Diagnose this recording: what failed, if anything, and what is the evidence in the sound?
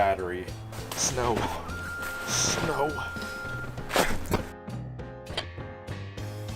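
The codec stage failed: three bursts of corrupt frames decoded at 1.82 to 1.90 s, 4.29 to 4.40 s and 5.31 to 5.44 s, the loudest peaking around -10 dBFS. Flipped bits sent energy to wrong frequencies, giving chirps, squeaks, blips or bursts of noise.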